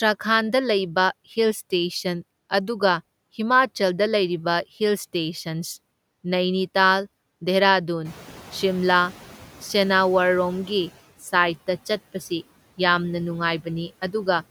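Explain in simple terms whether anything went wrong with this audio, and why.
At about 8 seconds the background noise in the room suddenly gets louder. The noise suppressor is catching up: from 8.04 to 10.94 seconds the noise comes through with less cleanup at first. Over those three seconds the cleanup adjusts to the new noise, and it fades down.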